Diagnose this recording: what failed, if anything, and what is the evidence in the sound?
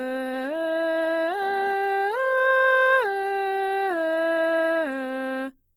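Opus compression throughout: grainy, rough music tones, top intact to 20.1 kHz; likely codec stage near 16 kbps in CELT mode, noise-filling starved bands.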